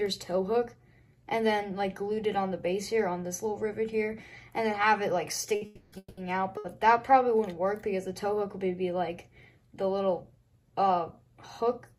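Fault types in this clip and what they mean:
Short stall from a late packet: at 5.55 s and again at 6.57 s a sound hangs on for a beat, stretched by about 60 ms and 70 ms while the jitter buffer sat empty waiting for a late packet, then it picks up exactly where it stopped.
Call audio freeze: from 5.65 to 5.94 s and 5.98 to 6.19 s the audio holds, the last sound carried on as a fading buzz, the second one dropping to silence for about 40 ms, likely packets delayed in transit; nothing's lost, just gaps of about 270 ms and 190 ms inserted.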